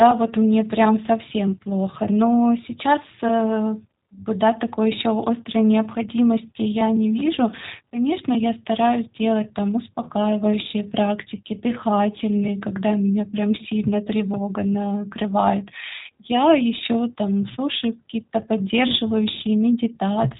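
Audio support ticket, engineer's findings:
G.729 codec throughout: rough, synthetic speech, nothing above 3.8 kHz, fitting an 8 kbit/s pulse-coded vocoder. Unlike plain band-limiting, the model-rebuilt speech adds buzzy roughness, not just dullness.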